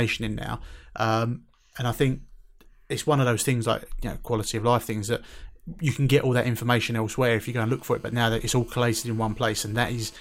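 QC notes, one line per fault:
7.48–10.15 s, GSM phone buzz: right after "that information elsewhere if", a hard, raspy buzz at about 217 Hz comes in, thick with harmonics and sitting about 32 dB under the speech. It holds steady, as a nearby 2G handset on a call would, with the circuit rectifying its radio bursts.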